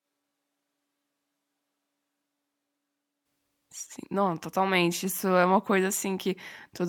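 Speech, opening on a switch to a distant microphone that is already under way at the start and runs to 3.24 s. The sound is hollow, roomy and thin in the bass, roughly 5 dB down, with room noise around 25 dB below the speech. The close microphone's signal was likely missing, leaving a farther pickup.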